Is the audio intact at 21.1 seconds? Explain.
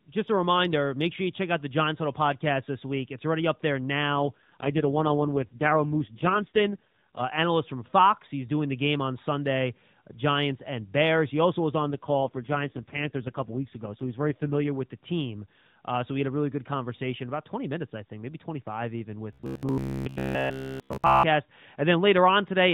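No, 21.1 s falls inside a burst of robotic sound from repeated short buffers, running from about 19.33 to 21.23 s. Audio likely arrived too slowly, so all of that stretch is made of short chunks replayed over and over, giving a rigid metallic buzz at 66.7 Hz, which fits a buffer of about 15 ms.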